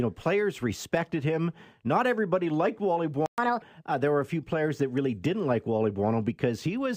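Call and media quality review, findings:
Playback stall, 3.26 to 3.38 s. Speech cuts to silence for 120 ms, then resumes. Likely cause: player buffer underrun or a blocked audio thread.

Catch-up at higher speed, 3.38 to 3.62 s. Playback runs at 1.5x, with pitch raised about seven semitones. The player resamples its backlog to recover lost time.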